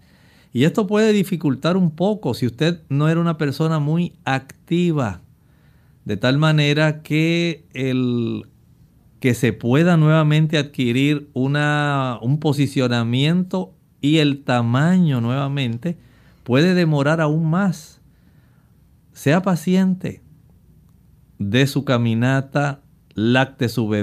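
No technical faults can be heard anywhere in the speech recording; the signal holds steady throughout.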